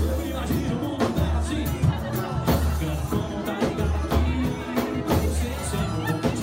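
No technical faults are audible anywhere in the audio.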